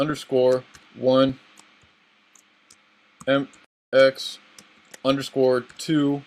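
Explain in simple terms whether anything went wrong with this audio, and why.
Something did go wrong: at 3.65 s the sound suddenly cuts out and stays silent for a bit under a third of a second, about 280 ms, before picking up again at 3.93 s. This is a playback stall. The likely cause is that the player briefly ran out of audio data to send to the speakers, or was held up by other work, so it had nothing to play until it caught up and carried on.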